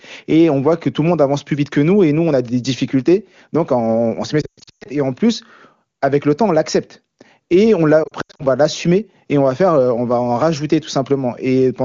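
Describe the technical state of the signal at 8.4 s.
At 8.4 s the audio is inside a burst of lost AMR speech frames running from 8.04 to 8.45 s. About 200 ms of audio, consistent with ten 20 ms frames, is missing, scattered across 360 ms, with the longest gap 80 ms. For each gap the wideband decoder repeats its last good pitch and spectral settings with falling gain, so the sound warbles, dips and briefly fades before returning weak or rough.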